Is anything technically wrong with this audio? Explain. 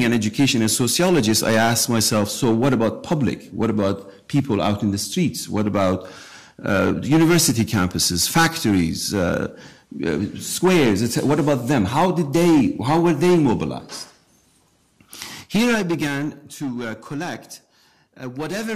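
Yes. From 15.28 to 16.4 s, a drop of about 10 dB is applied in unsmoothed jumps of about 3 dB, roughly three per second. Each jump clicks, so zipper noise ticks over the sound as it fades.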